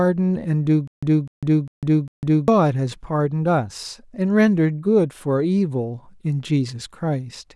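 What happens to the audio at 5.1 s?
Nothing goes wrong at 5.1 s; the speech there plays through intact, with no dropout, click or other fault.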